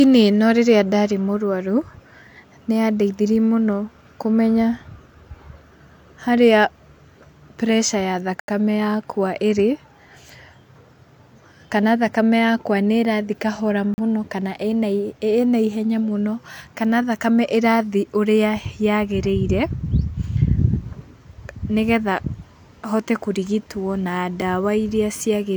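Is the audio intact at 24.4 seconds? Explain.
No. A block of digital silence sits at 24.41 s, just after "hote kũrigitwo na": about 6 ms of samples drop straight to silence and back with no fade, likely because the output buffer wasn't filled in time, so the hard edges make a short tick in the speech.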